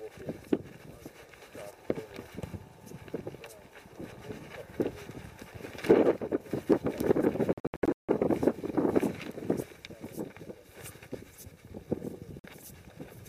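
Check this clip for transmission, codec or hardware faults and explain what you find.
Two dropouts break the audio, with the pattern of a Bluetooth dropout. From 7.53 to 8.09 s, the sound cuts in and out. Gaps totalling 418 ms are scattered across those 557 ms, and the longest silent run lasts 162.5 ms. At 12.39 to 12.44 s, a single 46 ms hole appears. The likely cause is packets arriving too late at the headphones and being discarded. Silence fills each gap, with abrupt edges or a fade of a few milliseconds. The sound then resumes further on, as though it had kept playing.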